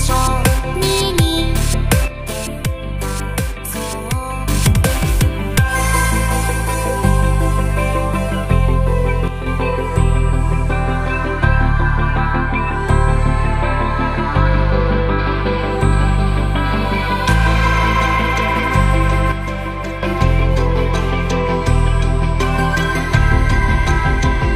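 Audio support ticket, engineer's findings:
One channel drops out, 2.08–4.48 s, 9.28–9.46 s, 19.32–20.03 s. Abrupt level dip of about 6 dB, then recovery; sound otherwise unchanged. Likely a stereo channel lost upstream of the mono sum.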